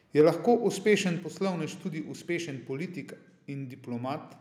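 Speech, with a brief harsh crackle from 0.19 to 0.21 s, where the peaks go about 2 dB past the converter's limit and roughly a tenth of the samples are flattened. That is microphone overload, likely from input gain set too high for the converter. Right after, at 0.21 s, voice and background drop together by about 3 dB, and again at 1.2 s by about 5 dB. These are microphone volume stepped down events: the level falls in single abrupt steps, the likely cause being call software lowering the device's input gain in response to the microphone being too loud or clipping.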